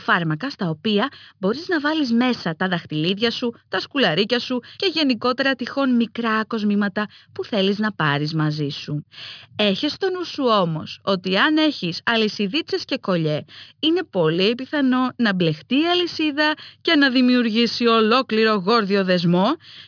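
No technical faults can be heard anywhere in the clip.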